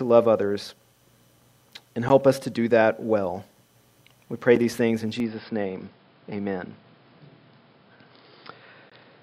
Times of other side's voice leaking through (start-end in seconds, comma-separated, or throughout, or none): none